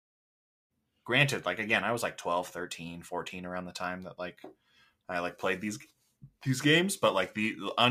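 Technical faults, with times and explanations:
No technical faults are audible in this speech recording.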